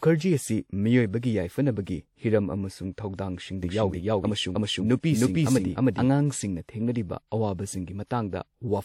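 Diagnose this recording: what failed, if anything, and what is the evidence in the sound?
The codec stage failed, producing pre-echo. Three speech attacks are preceded by a short hiss. The first runs from 2.92 to 2.98 s, about 58 ms, just after "ꯌꯥꯢꯐꯅꯕꯒꯤ ꯍꯤꯔꯝ ꯑꯃꯁꯨꯡ". The others fall at 5.00 to 5.03 s (38 ms) and 8.06 to 8.11 s (44 ms). Each attack sounds softened. A transform coder spread quantisation noise across its block. The noise meant for the loud onset leaked into the quiet moment ahead of it.

A doubled audio track appears from 3.63 to 6.09 s. A full-band copy of the speech trails the original by about 300 ms. It sounds roughly as loud as the original. The copy has no decay and no room colour, so it is not reverberation. It starts and stops abruptly. The likely cause is a second, slower capture path mixed back in, or an edit holding two offset copies.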